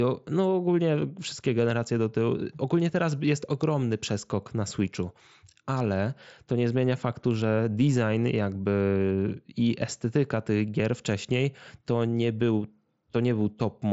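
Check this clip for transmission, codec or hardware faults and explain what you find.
No faults are audible anywhere in this speech clip.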